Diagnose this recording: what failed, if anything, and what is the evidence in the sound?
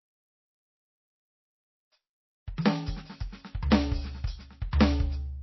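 The codec stage failed: the music was likely squeezed through MP3 encoding at a very low bitrate, roughly what a 24 kbps stream would allow. Across the whole clip nothing reaches above 5.8 kHz, a hard treble ceiling that the encoder imposes when it runs out of bits. The damage is plainly audible. With so few bits, weak frequency components drop in and out from frame to frame, giving the music a watery, swirling texture and blurring its attacks.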